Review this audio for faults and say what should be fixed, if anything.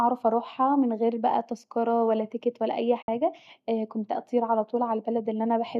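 At 3.01 to 3.08 s, right after "ولا تيكت ولا اي", there is a corrupt frame concealed, spanning about 70 ms. The decoder detected damaged bits in the AAC stream and covered the span itself, muting it or filling it with a scrambled copy of the previous spectrum. The length fits about three AAC frames. On a waveform it shows as a brief tapered dip. On a spectrogram it appears as a faded or smeared vertical band across the harmonics. Preventing it needs error protection or retransmission on the channel carrying the AAC stream, so that damaged frames never reach the decoder.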